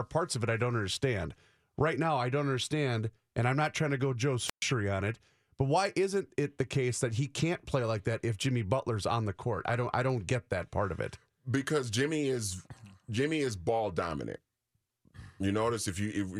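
At 4.46 s a wireless microphone squelch dropout begins. The radio signal fades, hiss swells, then the receiver's squelch mutes the output for 126 ms until speech returns at 4.64 s on "on it but why". That rising static is what sets it apart from an abrupt digital packet-loss gap.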